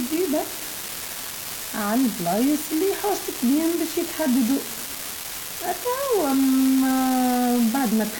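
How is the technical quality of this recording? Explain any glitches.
The recording has one real problem, an unreliable data bit running the whole way through. One data line looks marginal, so its bit flips at random, and every wrong sample becomes a spike of the same size. You hear it as a constant crackly fizz that carries right on through the pauses between phrases.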